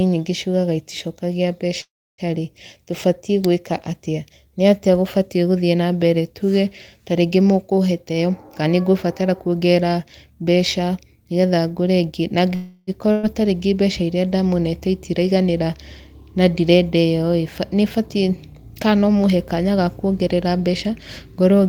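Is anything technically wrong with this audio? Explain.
Yes. At 1.81 to 2.21 s and 12.55 to 12.90 s the speech stalls into a fading continuation of the last sound. In the first it falls silent for about 0.3 s, and then the speech carries on from where it stopped. These are call audio freezes, likely from delayed packets draining the jitter buffer.

From 8.09 to 9.96 s the speech sounds hurried at unchanged pitch, running 118% fast. It does so again from 18.92 to 19.57 s at 112%, just before "ga kuongerera". This is jitter buffer speed-up, with the receiver trimming pitch periods, roughly 0.3 s and 0.1 s in total, to shrink its delay.

At 13.12 to 13.26 s a brief fading continuation of the last sound covers a jump, with about 120 ms of speech gone. This is a burst of packet loss, and the receiver's concealment stretched the last sound over the gap.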